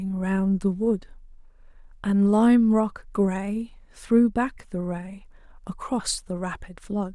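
No technical faults are audible anywhere in this speech.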